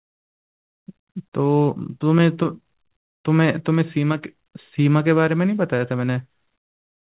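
The speech comes across intact with no technical faults, carried over a telephone-grade call path whose band limit, with nothing above 4 kHz, points to a G.711 mu-law codec.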